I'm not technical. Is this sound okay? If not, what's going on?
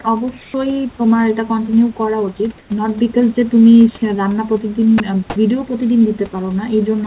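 No. At 0.42 to 0.54 s and again at 2.58 to 2.70 s, there is comfort noise in place of the background. The real room sound briefly becomes a flat, featureless hiss, a little quieter. The likely cause is the call system pausing transmission during quiet moments and filling the gap with artificial noise.

At about 4.98 s, a tiny piece of the speech is lost. This is sound dropped by the voice detector. For a moment, the call system likely mistook part of the speech for background. It swapped in that same artificial hiss before the voice came back.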